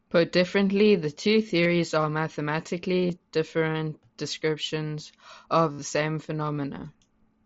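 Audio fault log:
1.63–1.66 s, 3.07–3.10 s and 5.73–5.82 s, concealed Bluetooth headset packet loss: gaps of about 22 ms after "differently the two" and before "different descriptions of" are patched almost invisibly. After "different descriptions of", about 75 ms are lost across 90 ms, with a 60 ms run. The receiver repeats the last stretch of waveform, so the run holds a buzzy tone at full level. On a spectrogram it shows as evenly spaced horizontal harmonic bands, and on the waveform as copied, repeating cycles, with a slight warble where real audio resumes over the mSBC link.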